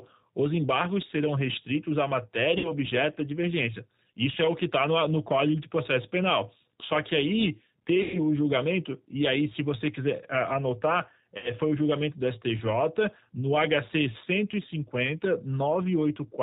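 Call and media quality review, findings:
G.729 codec throughout, 8 kbit/s: filter-and-pulse speech model, nothing above 4 kHz. Speech band-limited, rough, plainly synthetic-sounding.

VoIP packet loss concealed by the speech codec, at 2.58–2.71 s, 8.02–8.20 s and 11.38–11.50 s. Decoder extrapolated over about 60 ms, 120 ms and 60 ms of lost audio. Buzzy tone or coloured noise, fading, then weak or distorted speech while recovering.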